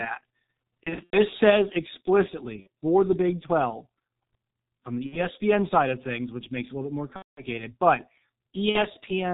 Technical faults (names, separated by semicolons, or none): G.723.1 codec; VoIP packet loss concealed by the speech codec